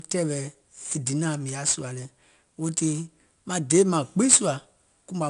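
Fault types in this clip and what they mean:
4-bit ADPCM compression: Each sample is coded as a 4-bit difference from a predicted value, with the quantiser step adapting to the signal, so the coding error becomes broadband noise that rises and falls with the speech level. Here the damage is plainly audible throughout as a gritty hiss riding on louder syllables, with roughness on sharp onsets. Nothing reaches above about 10.7 kHz, which fits a sample rate near 22 kHz and a data rate around 89 kbps.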